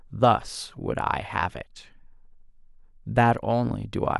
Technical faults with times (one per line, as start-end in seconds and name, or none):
1.07 dropped samples